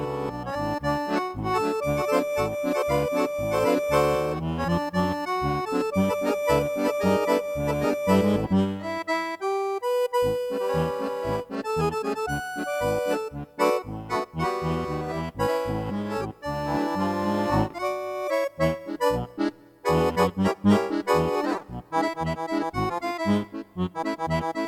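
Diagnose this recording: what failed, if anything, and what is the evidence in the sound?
Nothing here points to a failure at any stage: the sound holds together the whole way, with no dropouts, glitches or damage you can pin to a moment.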